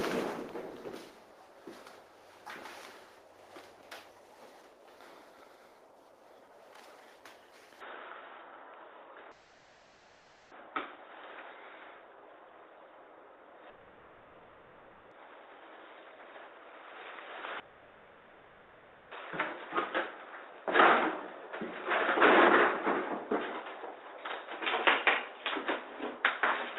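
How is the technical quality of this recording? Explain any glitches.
The recording has two clear problems: a drop in sound quality partway through, and three long gaps where the audio is lost and replaced by filler.

From 7.81 s to the end, the sound abruptly turns dull and boxy. Nothing remains above about 3.8 kHz, the level shifts by a few decibels, and a new faint background noise appears well below the signal. The change happens instantly, with no silence at the switch. The likely cause is an input switched to a poorer device, such as a different microphone or a headset in its narrowband call profile. Before the switch, the call path's Opus coding at 20 kbps let the audio reach up to about 12 kHz. Afterwards, the new device's narrower response sets the limit.

Long network dropouts occur at 9.31 to 10.53 s, 13.69 to 15.13 s and 17.59 to 19.13 s, lasting about 1.2, 1.4 and 1.5 s. In each, the real audio stops and is replaced by a smeared continuation of the last sound, a fading buzz or hiss with no true silence. 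The audio then resumes further along, and the missing stretch is never recovered. This is likely the receiver's concealment covering packets that never arrived.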